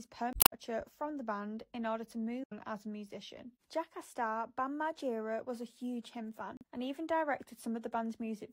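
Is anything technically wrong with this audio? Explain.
Yes. There is damaged data in a compressed stream at 0.30 to 0.53 s, 2.42 to 2.52 s and 6.57 to 6.63 s. In each spot, part of the encoded data has been lost or corrupted, so the decoder misreads the affected frames, loses its place in the stream and hunts for the next valid frame header before normal playback resumes. Each burst is heard as a chirp, squawk, click or short hole, with the longest at the start.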